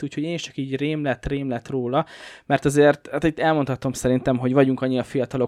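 Nothing technically wrong turns up in this short bit of speech, so there's no fault to point at here.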